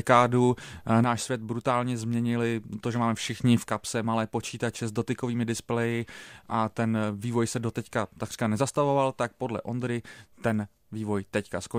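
At 1.04 s the speech abruptly drops about 6 dB and stays down until 3.44 s, then falls again from 3.68 s to the end. Likely one channel drops out, halving the summed level. The waveform shows sudden step-downs, with the spectrogram uniformly dimmer.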